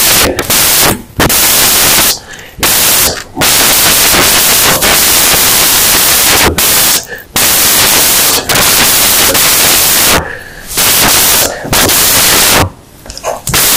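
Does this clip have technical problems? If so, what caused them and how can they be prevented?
Yes. Throughout, samples built from the wrong bytes: misassembled or byte-swapped samples turn low bits into loud white noise. Prevent by declaring and verifying endianness, sample width and alignment.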